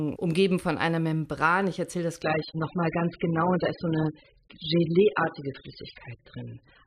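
Right after "erzähle das", at about 2.23 s, the speech drops to a lower-bitrate version of the adaptive stream and stays there to the end. The switch is abrupt but gapless, the classic sign of the player falling back when the connection slowed. Everything above roughly 5.1 kHz vanishes, so the top end goes dull and a bit swirly with codec artefacts, which fits a jump from a decent AAC rate down to something near 8 kbit/s.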